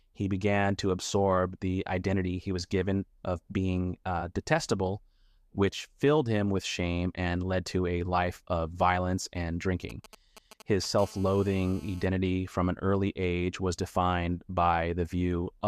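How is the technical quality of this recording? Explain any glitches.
The recording is marred by mobile-phone interference between 9.90 and 12.06 s. It begins as GSM signalling bursts and then settles into a continuous GSM phone buzz.

From 9.90 to 10.99 s, GSM signalling bursts sit roughly 20 dB below the wanted sound. A nearby 2G handset is exchanging brief control traffic with the network, and the audio circuitry rectifies each radio packet. The result is a galloping dit-dit-dit of short buzzes at 217 Hz. A spectrogram shows clustered vertical striations with a harmonic comb above 217 Hz, and the waveform shows spiky groups separated by gaps.

From 10.99 to 12.06 s, the phone is in a call, so it transmits its time-slot bursts steadily at 217 per second. Rectification turns this into a hard, raspy GSM phone buzz about 25 dB below the signal, with no relation to the programme material. 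A spectrogram shows unbroken horizontal lines at 217 Hz and its many multiples, reaching well into the kHz range. The waveform carries a regular train of short pulses beneath the audio.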